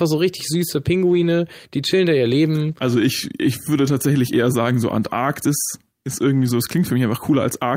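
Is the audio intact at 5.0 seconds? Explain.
Yes, at 5.0 seconds the speech plays through cleanly, with no dropout, click, distortion or other audible disturbance at that moment.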